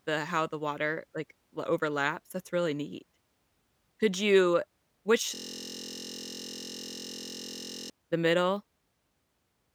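From 5.35 to 7.90 s, after "you which", a system hang loop repeats one 23.2 ms slice, fitting a 1024-sample buffer, giving a 43 Hz buzz: identical waveform cycles, harmonic stripes on the spectrogram.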